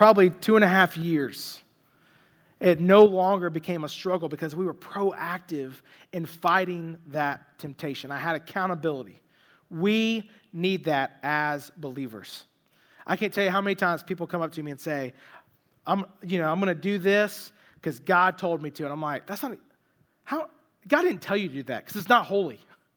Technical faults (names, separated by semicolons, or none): microphone overload; microphone volume stepped down